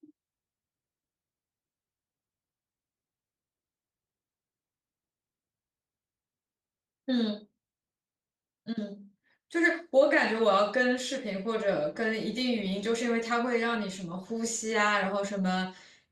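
Listening to the speech recording, nothing stood out as a technical fault at any point.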